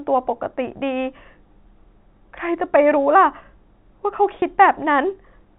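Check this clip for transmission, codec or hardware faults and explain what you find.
One transmission fault is present. From 4.40 to 4.42 s there is packet loss with pitch repetition: about 20 ms went missing, consistent with a single lost packet, and the receiver filled the gap by repeating the last pitch period, heard as a brief held, buzzy note. The G.711 telephone coding path keeps the sound band-limited below 4 kHz.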